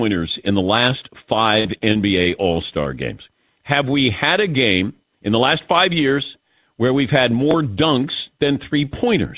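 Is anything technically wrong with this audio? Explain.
Yes, there are three timing and loss faults in this speech, heard over a call path with nothing above 4 kHz, which points to narrowband G.711 coding.

Repeated packet loss (robotic sound), 1.60 to 2.28 s, just after "in the last": five gaps, the longest 46 ms, are patched by extending the previous sound. The result is choppy and robotic.

Jitter buffer slow-down, 2.30 to 2.82 s: repeated pitch periods add 59 ms to refill the buffer. Speech runs at 91% speed, drawn out at unchanged pitch.

Jitter buffer speed-up, 4.47 to 5.01 s, between "we had a" and "in the last five": about 50 ms of pitch periods are cut to shrink the delay. Speech runs at 108%, sounding hurried.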